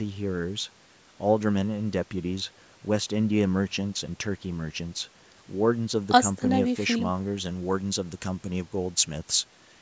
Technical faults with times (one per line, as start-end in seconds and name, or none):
7.45-9.81 pre-emphasis left on